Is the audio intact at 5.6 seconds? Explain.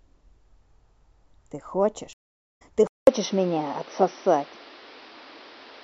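No. From 2.87 s to the end, the speech sounds like it likely comes from an input switched to a poorer device. A 200 ms gap marks the switch. After it, nothing passes above 6 kHz, so the speech sounds dull and boxy. The level shifts by a few dB, and a new, faint background noise appears.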